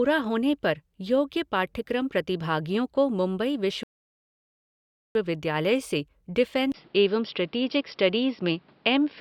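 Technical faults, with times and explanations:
3.83 to 5.15 s, rebuffering stall: the speech drops to silence for about 1.3 s and then carries on from exactly the point where it stopped, so nothing goes missing, the clip just gets longer by that gap. That's the player running dry on downloaded audio and sitting idle until the next chunk turns up, which is why the pause is dead quiet and the resumption is seamless rather than skipping ahead.
6.72 to 9.21 s, input switched to a poorer device: after a 20 ms silence at 6.72 s the speech turns dull and boxy through to the end, with nothing above 5.5 kHz, and a new background noise floor sits well under the speech, roughly 35 dB down. Loudness stays about the same. The abrupt band cut plus the fresh noise character most likely means the recording jumped to a different microphone or a headset's call profile at that moment.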